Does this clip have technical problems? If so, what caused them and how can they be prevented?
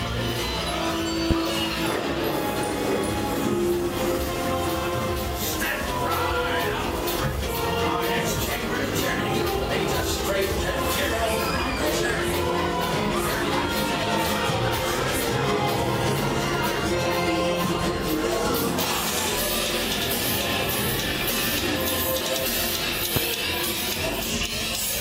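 Yes. A voltage spike, likely from a switch, plug or static discharge, added two loud pops at 1.31 to 1.34 s and 23.16 to 23.19 s, each a single sharp thump well above the sound. Muting outputs before switching and securing cables prevents this.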